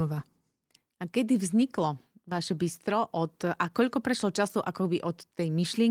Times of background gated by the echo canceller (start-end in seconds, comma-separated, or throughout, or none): none